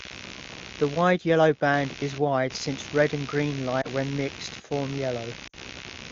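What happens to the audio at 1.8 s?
Computer activity noise is present at 1.8 s, as it is for the whole clip. Shifting processor or peripheral load disturbs the audio circuit's shared ground, producing a buzzy, pulsing rasp at roughly 70 pulses per second, sitting only moderately below the speech level.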